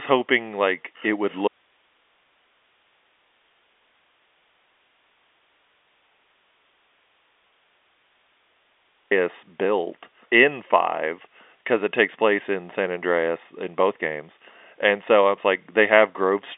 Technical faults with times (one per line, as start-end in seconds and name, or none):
1.48-9.11 audio dropout to a faint residue